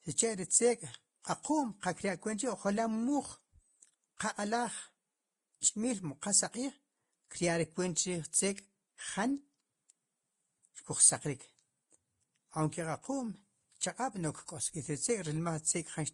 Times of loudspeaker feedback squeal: none

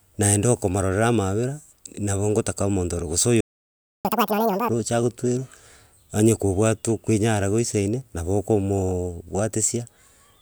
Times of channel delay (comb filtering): none

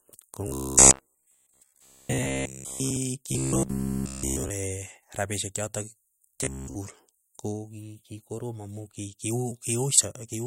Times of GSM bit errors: none

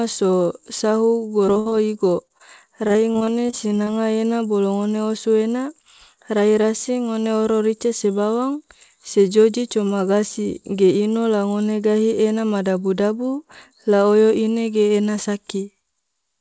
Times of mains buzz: none

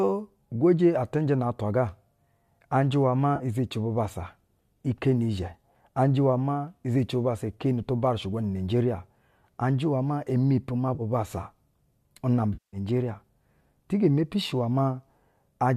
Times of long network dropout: none

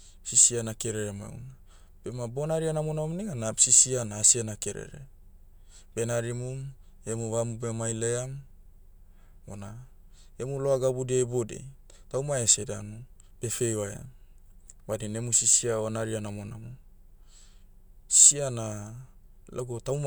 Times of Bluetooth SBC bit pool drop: none

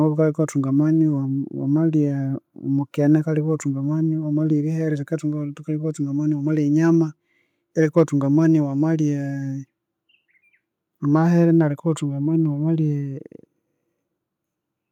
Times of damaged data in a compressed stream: none

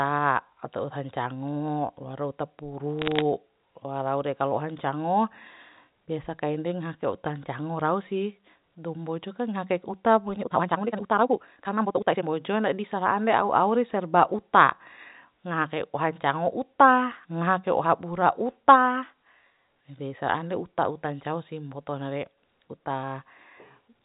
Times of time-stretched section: 10.38-12.24

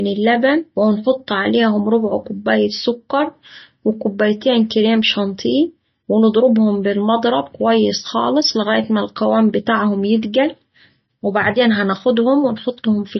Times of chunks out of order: none

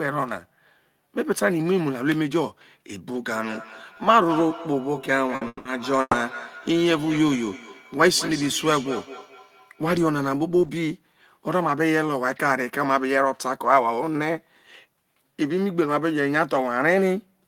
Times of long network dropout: 5.47-5.68

